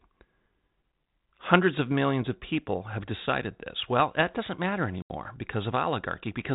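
At 5.02 s, right after "that doesn't matter", the speech drops into a hard-edged hole of silence, a packet loss on an ADPCM call in which about 80 ms of audio, a few packets, went missing. What sets it apart from a plain dropout is the re-entry near 5.15 s: the 32 kbit/s G.726 decoder's predictor and step size have drifted from the sender's, so the sound resumes with brief distortion before settling within tens of milliseconds.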